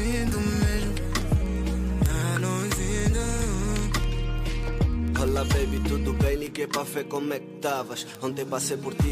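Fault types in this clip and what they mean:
Word clock ticks: the receiving device is running on its own clock instead of locking to the incoming digital stream, and here the two drift apart by roughly 500 ppm. Each time they slip, a single sample is dropped or repeated and the sound ticks, about twenty times a second from 0.13 to 9.09 s, roughly 200 ticks in all. The steady, rapid rate of these tiny single-sample slips sets them apart from irregular buffer dropouts, which leave audible gaps.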